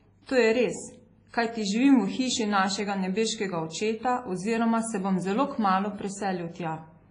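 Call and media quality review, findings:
Whole clip: ringing, washy speech with a hiss that breathes with the signal. Band ends at 10.2 kHz. Likely WMA compression, heavy long-block quantisation damage consistent with a 24 kbps encode. The hiss rises and falls with the speech, unlike a steady noise floor.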